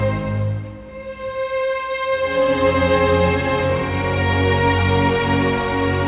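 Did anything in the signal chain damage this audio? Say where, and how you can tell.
No, nothing in the signal chain damaged this audio. No stage of the chain has left a mark that can be heard.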